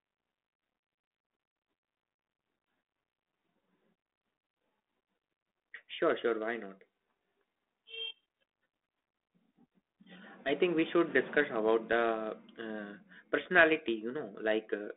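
No faults to report: the speech sits on a G.726 link at 32 kbit/s with the usual telephone band of roughly 250 Hz to 3.6 kHz.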